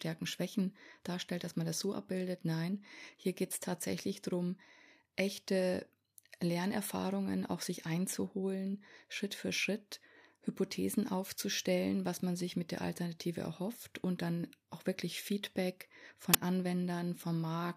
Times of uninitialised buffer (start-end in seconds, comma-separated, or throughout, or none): 16.34